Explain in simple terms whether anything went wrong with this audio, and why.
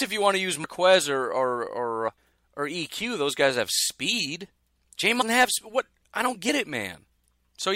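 Compressed frames skipped, three times: at 0.63–0.65 s after "you want to use", at 2.07 s after "or or or", and at 5.20–5.23 s before "have what". Each time roughly 0.15 to 0.3 seconds of speech vanishes and the sound jumps ahead. The join is a brief blip or click rather than a silent gap.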